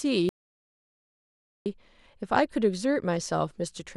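At 0.29 s the speech drops out to dead silence, with no room tone, until 1.66 s, about 1.37 s lost: an audio dropout to silence, likely from a lost input feeding zeros.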